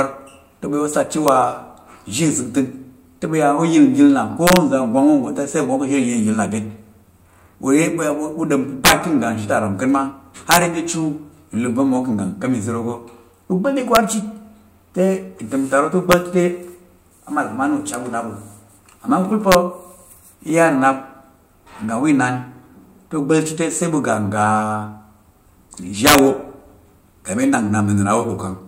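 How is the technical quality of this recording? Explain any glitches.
The speech recording has repeated integer overflow cracks at 1.28 s, 4.47–4.57 s, 8.85–8.92 s, 10.51–10.57 s, 13.95 s, 16.12 s, 19.52–19.55 s and 26.07–26.19 s. Loud peaks exceeded the integer range, by up to about 7 dB at 8.85 s, and wrapped to the opposite sign instead of limiting. The result is violent cracks, harsher than clipping.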